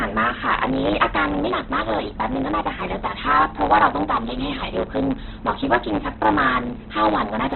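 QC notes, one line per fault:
Throughout, block size mismatch (truncated): The speech carries a steady buzz at 109 Hz and runs 1.09 times fast while keeping about its normal pitch. One stage writes longer blocks than the next stage reads, and the tail of every block is discarded. That leaves a splice discontinuity about every 9.2 ms, which is the buzz. On the waveform these show as small regular jumps. On a spectrogram they appear as fine vertical striations and a faint harmonic comb at multiples of 109 Hz.
Throughout, Opus compression: The speech sounds rough, grainy and noisy rather than swirly. There is nothing above 4.2 kHz, so the result is narrowband and dull, and the codec damage is heavy. This is likely a low-rate Opus encode in its music mode. The encoder keeps each band's energy but fills starved bands with noise or folded copies of lower ones, which fits a bitrate around 12 kbps. 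A spectrogram shows a hard ceiling at 4.2 kHz and blurred, speckled harmonics below it.
0.24 to 7.53 s, clock slip clicks: Faint ticks recur about every 0.4 s, around twenty in all. They are clearest on loud, sustained parts of the speech and absent in pauses. A single sample is dropped or repeated at each one, likely because two devices run on unsynchronised clocks. The drift fits a clock mismatch of roughly 50 parts per million. On the waveform each slip is a tiny one-sample step. On a spectrogram each appears as a faint, thin vertical line spanning the band, spaced at even intervals.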